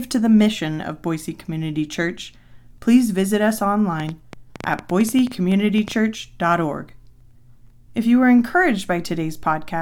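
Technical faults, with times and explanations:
4.00–5.93 s: train of clicks. About twenty sharp, similar ticks at 8.9 per second, unevenly spaced and peaking about 10 dB above the speech, likely from interference or a faulty connection. On a waveform they are thin spikes; on a spectrogram, narrow vertical broadband lines.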